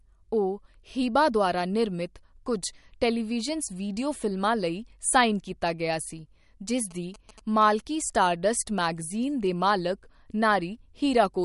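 Heavy data reduction, likely MP3 compression, runs through the whole clip. Short of bits, the encoder has cut everything above 11.2 kHz and dropped quieter spectral detail, with the dropped components flickering in and out from frame to frame. The damage is plainly audible: the speech sounds dull and watery, with a swirling, metallic edge on sibilants and smeared onsets, which points to a low bitrate around 48 kbps.

From 6.91 to 7.63 s, GSM signalling bursts break in. A nearby 2G phone exchanging control traffic with the network transmits in short radio pulses, and some part of the audio circuit rectifies them into the signal. This adds a galloping dit-dit-dit of short buzzes at about 217 Hz, sitting roughly 20 dB below the speech over that stretch.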